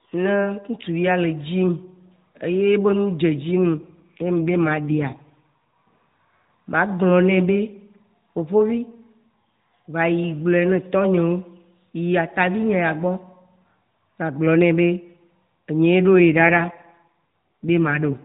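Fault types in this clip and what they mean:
AMR rate drop: A weak link pushes the mobile speech codec to a lower rate, spending bits on error protection. From 3.52 to 5.63 s and 16.32 to 18.24 s, the speech turns rougher and more synthetic. This fits a fall from 12.2 to 5.9 kbps. There is no gap.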